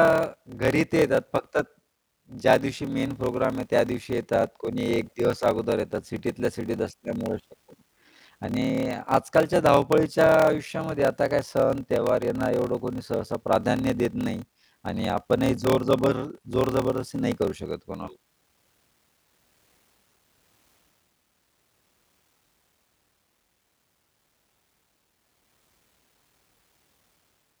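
From start to finish, the speech carries a low buzz at about 38.3 Hz: a block size mismatch (padded). One stage hands over blocks that fall short of what the next stage reads. The sound points to 1024-sample blocks feeding 1152-sample reads, and the missing tail of each block gets zero-filled. That tiny silence in every block makes the buzz, and the whole thing plays at about 0.889 times normal speed while the pitch stays roughly where it should be.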